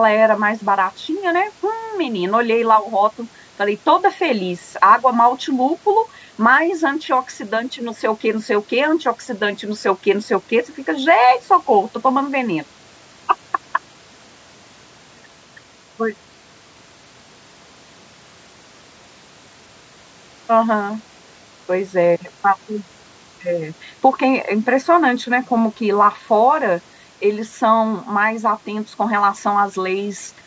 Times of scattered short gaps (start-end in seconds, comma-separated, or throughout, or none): none